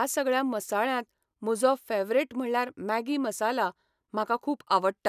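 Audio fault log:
No faults detected in this speech recording.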